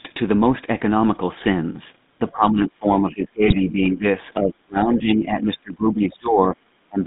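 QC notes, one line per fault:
Throughout: GSM full-rate codec. The audio has a buzzy, gravelly roughness from pulse-driven vocal-tract modelling that fits the 13 kbps full-rate coder. The band runs from about 150 Hz to 3.7 kHz. A spectrogram shows a hard ceiling near 3.7 kHz with smeared, grainy harmonics below it.
2.32–4.04 s and 4.39–7.01 s: speech suppressed in double talk. The level sags and the top end dulls in patches, dropping by about 20 dB in the first stretch and about 25 dB in the second. The likely cause is an echo canceller turning the talker down while the far side spoke. The waveform shows pinched, uneven envelopes, and the spectrogram shows fading upper bands.
3.46–3.53 s: GSM bit errors. A short squawk and gargle lasts about 60 ms, which fits three corrupted 20 ms frames. The damaged filter, pitch and gain values bend the spectrum for a moment. The spectrogram shows a brief vertical smear of misplaced energy.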